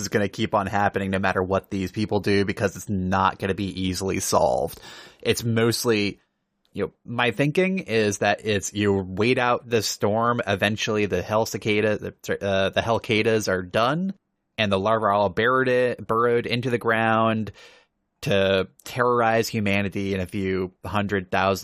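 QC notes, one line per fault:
No fault found.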